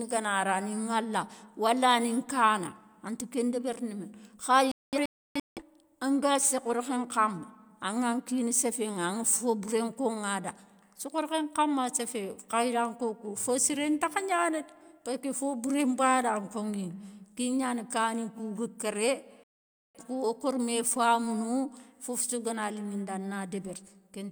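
At 4.72 s a digital broadcast dropout breaks the speech into several short silent holes until 5.62 s, removing about 0.68 s of sound, the longest gap 0.30 s. At 19.44 s a second dropout mutes the speech through 20.00 s, losing about 0.51 s. The receiver failed to decode frames and muted. Unlike packet-loss concealment, nothing is patched or repeated. The sound simply cuts out and resumes later, with the missing material skipped.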